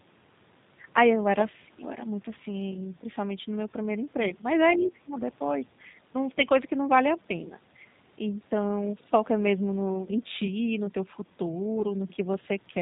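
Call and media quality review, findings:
Call and media quality review, findings:

G.729 codec, whole recording: plainly audible roughness and a slightly synthetic texture, with nothing above 4 kHz. The 8 kbit/s rebuild from filter, pitch and pulse model causes this. Unlike bandwidth-only limiting, the damage persists at constant grain.

Speech suppressed in double talk, likely cause: level dives by roughly 30 dB at 4.76–5.17 s, shallower dip of about 10 dB at 5.63–5.69 s. Echo canceller attenuation while the far end talks.

VoIP packet loss concealed by the speech codec, 11.80 s: brief fading smear, fits one lost 10 ms frame. Decoder extrapolates last pitch and filter, fading gain. A fading extrapolated fill distinguishes it from suppression.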